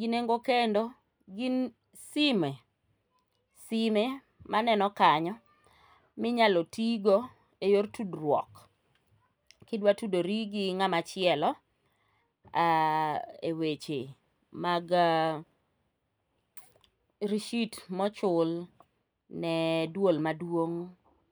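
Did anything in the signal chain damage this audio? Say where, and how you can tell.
No, the chain shows no damage.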